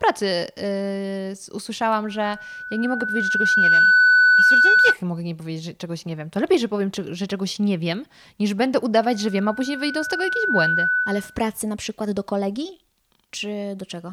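At 2.06 s a loudspeaker feedback squeal kicks in: the mic is hearing its own speaker, and around 1.5 kHz the loop gain tips past one, so a pure tone swells over roughly a second and a half until it sits about 10 dB over the speech, cutting off at 4.97 s right before "mogę nie powiedzieć że". It comes back after "nie wiem niż będę" at 9.00 s, a bit tamer at about 5 dB above, and dies at 11.46 s ahead of "na przykład do kolegi".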